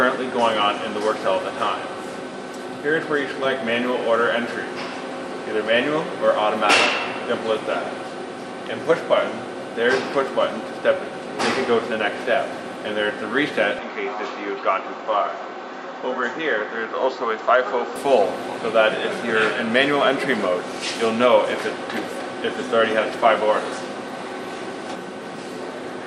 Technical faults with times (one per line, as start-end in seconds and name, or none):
13.79-17.96 input switched to a poorer device